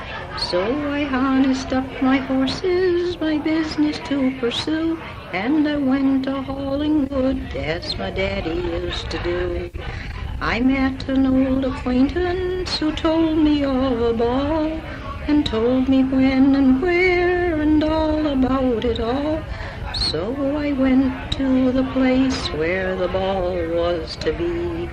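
No technical faults are audible.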